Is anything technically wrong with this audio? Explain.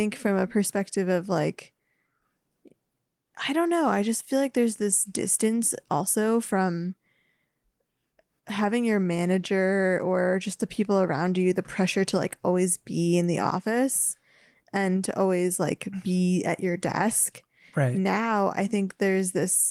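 No, nothing is technically wrong; the speech carries only the light coding texture of Opus voice compression in hybrid mode at full bandwidth, which fits a stream of around 24 kbps.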